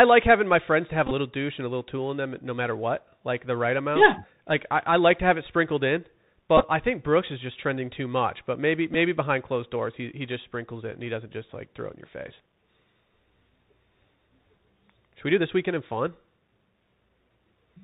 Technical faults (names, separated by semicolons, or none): Bluetooth CVSD headset codec; Bluetooth headset packet repeated